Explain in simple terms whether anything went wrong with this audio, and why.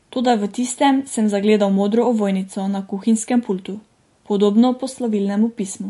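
The speech sounds dull and watery from start to finish, with s sounds turning smeary and metallic. That points to MP3 compression, likely squeezed too hard: the encoder dropped everything above about 11.3 kHz and let quiet details flicker in and out.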